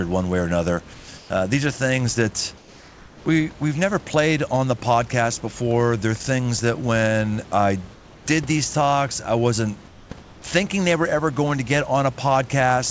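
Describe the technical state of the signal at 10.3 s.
Comfort noise in place of the background fills 10.22 to 10.44 s, between "these talks I wasn't" and "they were ever going". For 220 ms the room background becomes a flat, featureless hiss about 3 dB quieter, likely because transmission paused and the receiver synthesised filler noise.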